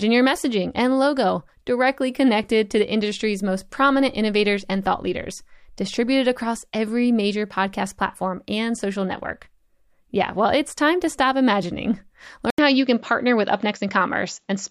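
At 12.50 s the speech drops out for about 80 ms. When it returns, it has lost its top end. Nothing is left above 7.6 kHz, so the sound is duller and boxy to the end of the clip. A faint new background noise sits far below the speech. The loudness stays about the same. The likely cause is an input switched to a poorer device mid-recording, with its own narrower band, tone and noise.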